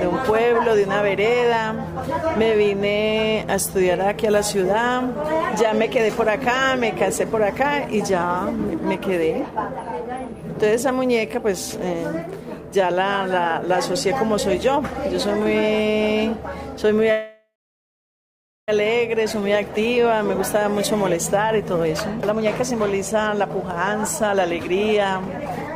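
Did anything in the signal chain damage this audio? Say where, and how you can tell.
Yes. From 17.11 to 18.70 s the sound stalls into a fading buzz or hiss, then about 1.2 s of silence, and resumes where it stopped with nothing lost. That is a call audio freeze, likely from network packets held up until the jitter buffer emptied.

A jitter buffer speed-up follows at 19.18 to 20.76 s (108%), 21.37 to 23.64 s (115%), and 24.23 to 25.75 s (117%). The sound runs hurried at unchanged pitch as the buffer trims pitch-period pieces, about 750 milliseconds in all, to shed the built-up delay.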